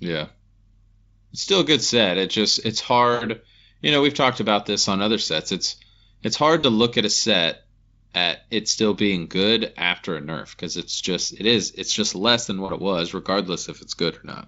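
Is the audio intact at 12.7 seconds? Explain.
No, at 12.65 to 12.73 s there's VoIP packet loss concealed by the speech codec. About 40 ms went missing, which fits two lost 20 ms frames, so the Speex decoder stretched its last pitch and filter into a fading tone or coloured noise that stays weak just past the gap.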